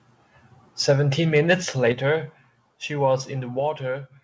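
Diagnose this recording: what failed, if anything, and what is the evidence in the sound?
The converter stage failed first. Loud speech peaks are flattened at 0.88 to 0.93 s, 1.36 to 1.54 s and 1.86 to 1.89 s. Each one carries a harsh, crackly edge. The longest and worst is the second, pushing about 4 dB past full scale. The other two go about 2 dB over. The likely cause is microphone overload. Input gain sat too high, so the tops of the waveform were cut off at the converter's limit.

Call processing then reacted. The whole signal, voice and room together, drops abruptly at 0.91 s by about 3 dB, at 1.92 s by about 7 dB, and at 3.60 s by about 4 dB. The first two steps land right on or just after the distorted peaks. That pattern points to the microphone volume stepped down in single jumps by the call software's gain control. It is not a smooth fade. The G.722 call path, with nothing above 8 kHz, is heard working normally.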